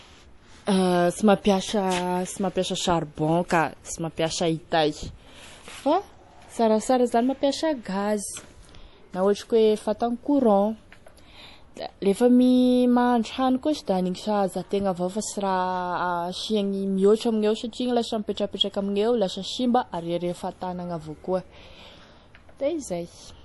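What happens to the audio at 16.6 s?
At 16.6 s, as throughout, MP3 compression is likely: treble stops dead at 11.5 kHz, a flat spectrogram ceiling, and weak detail swirls watery, fitting roughly 48 kbps.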